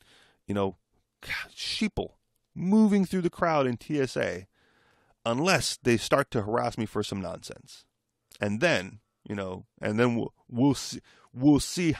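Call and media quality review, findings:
No findings for this call and media quality review.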